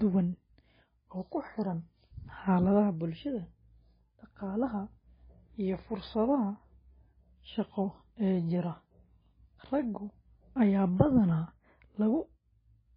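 Throughout the recording the speech sounds watery and swirly, with nothing above 5 kHz, dull sibilants and smeared consonant attacks. The cause is likely heavy MP3 compression at a very low bitrate of about 16 kbps, which cut the treble and switched weak frequency components on and off from frame to frame.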